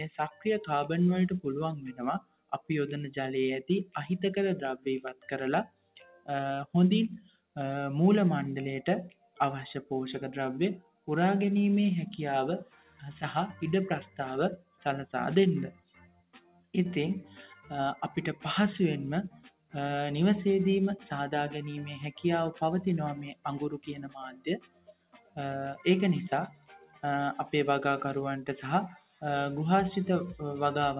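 From the start, a noise suppressor built for speech is working on the whole clip, mistaking steady tones and tails for noise. The level swings by roughly 10 dB, so the sound pumps and thins out. It all runs through a narrowband call path with nothing above 4 kHz, which fits G.711 mu-law.

On top of that, there are stretches of sound cut by the noise suppressor at 2.2–7.56 s, 9.1–11.08 s, 12.64–17.7 s, 19.3–19.74 s, 23.34–27.03 s and 28.89–29.23 s. Held parts drop by about 15 to 18 dB and decays get clipped short, while sharp attacks mostly punch through.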